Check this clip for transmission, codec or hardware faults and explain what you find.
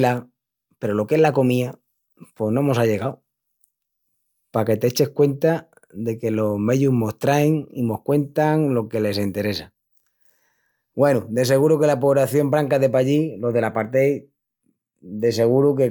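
Nothing in this speech recording points to a transmission, codec or hardware fault, so there's nothing here to flag.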